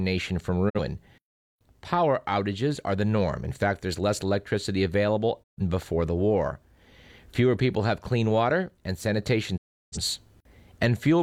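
The receiver three times lost the digital broadcast signal or rejected corrupt frames and muted until valid frames returned: a digital broadcast dropout at 0.68–0.79 s, 5.42–5.62 s and 9.56–9.98 s. Each time the speech fades out over about 20 ms into silence. The holes of roughly 43, 128 and 341 ms fit one, three and eight lost frames of about 43 ms each. Whatever was transmitted during these gaps is simply missing.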